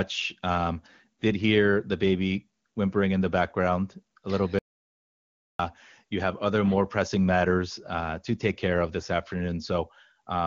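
Speech, carried over an AMR wideband (HD Voice) path whose clean band-limited sound fits its highest rate, has an audio dropout to silence from 4.59 s to 5.59 s, roughly one second lost. It follows "the background a little" and speech resumes at "you have other more". The gap is silent with no room tone, so the input was likely lost at the device or link while recording continued. A noise gate or fade would instead trail off gradually, and packet-loss concealment would fill the gap with smeared, buzzy sound.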